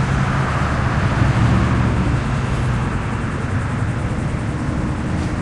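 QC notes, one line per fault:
No faults heard anywhere in this clip.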